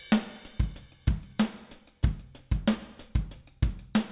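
Nothing in the recording stood out as a technical problem on listening.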